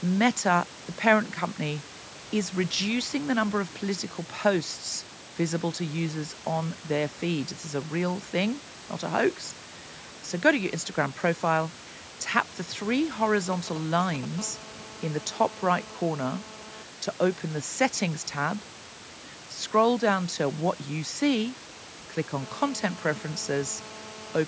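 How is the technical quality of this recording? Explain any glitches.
The recording has three faults: heavy-handed noise reduction across the whole clip, and interference from a nearby 2G phone in the second half.

Overdone noise removal runs from start to finish. The noise reduction was set too aggressively, so individual frequency bands are pulled down or switched off whenever they come close to the tool's noise estimate, and the softer parts of the speech are cut along with the noise. The background drops to near silence with small twinkling specks.

GSM signalling bursts appear from 13.53 to 14.25 s, right after "profile tap the three". A phone nearby was sending short groups of radio bursts, as it does while setting up a call or receiving a message. The audio circuitry rectified those pulses into the signal. The result is a galloping dit-dit-dit of brief 217 Hz buzzes, at a level of roughly 10 dB below the speech.

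GSM phone buzz follows from 14.39 to 16.84 s, ending just before "to open the settings", and returns from 22.41 to 24.43 s, just after "what you see click". Here the phone was in a call, transmitting bursts continuously at 217 per second, and the rectified pulses produce a hard, raspy 217 Hz buzz with many harmonics that is unrelated to the speech. It sits about 20 dB below the voice in the first stretch and about 19 dB below in the second.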